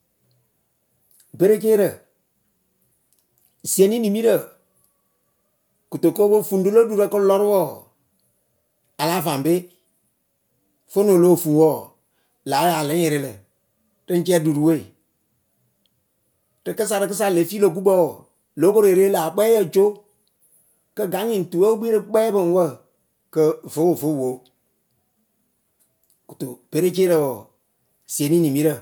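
Nothing technical gets in the way of the speech here; there's nothing to flag from beginning to end.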